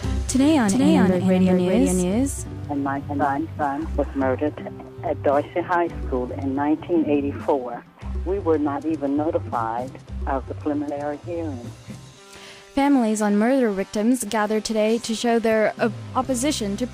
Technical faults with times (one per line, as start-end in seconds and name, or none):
0.00-4.22 doubled audio track